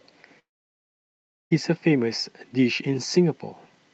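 This speech clip most likely suffered a long network dropout: from 0.39 s to 1.53 s no audio reached the receiver, and about 1.1 s of it was lost for good. The receiver briefly stretched the last sound into a fading buzz, then left near-silence for roughly a second before the speech resumed, joined straight to later material with the lost stretch simply gone. The call path's Opus coding limits the band to about 8 kHz.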